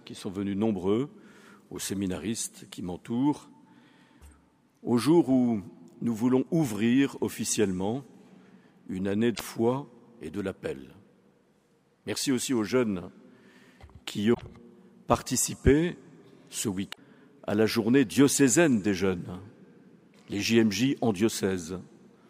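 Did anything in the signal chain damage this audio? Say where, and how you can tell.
Yes, the damage is at the codec stage: there is damaged data in a compressed stream. Corrupted bytes in the encoded file made the decoder misread frames, lose sync and hunt for the next valid frame header. Each time this happens the sound breaks into a brief chirp, squawk, click or short hole, lasting about a tenth of a second, at 9.31–9.41 s, 14.33–14.42 s and 16.89–16.98 s.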